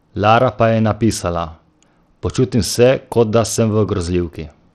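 A speech clip carrying plainly audible Bluetooth SBC compression damage from start to finish, likely the result of a low-rate SBC link, consistent with around 80 kbps. Nothing survives above 12.9 kHz. The starved upper sub-bands leave dull, flickering treble with gritty quantisation noise.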